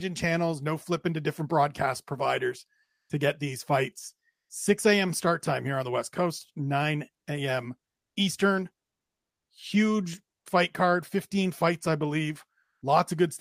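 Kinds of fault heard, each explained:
Comfort noise in place of the background: after "to different broadcast providers" (2.83 s), after "to get these fights" (4.31 s), and at 12.63 s, the real background becomes flat, featureless hiss about 3 to 5 dB quieter for 0.18 to 0.26 s, likely from discontinuous transmission with synthesised filler noise.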